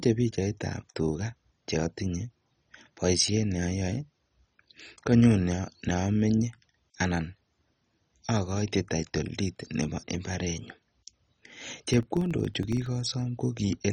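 MP2 compression, heard throughout the speech, is the likely cause of its dull, gurgling character. The upper sub-bands have been switched off entirely. The bands that remain are quantised so coarsely that a granular, watery distortion clings to the sound. The damage is heavy, which fits a very low bitrate of around 32 kbps, where Layer II has too few bits to spread across its 32 bands.

Filter restarted on every block, from 11.42 to 12.94 s, adds a buzz at about 21.5 Hz on top of the speech. The filter drops its memory at each block boundary and starts again from silence, so every block opens with a small transient. These repeat as rapid, regular ticks that fuse into a low buzz, rising and falling with the level of the sound. The repetition rate fits 2048-sample blocks.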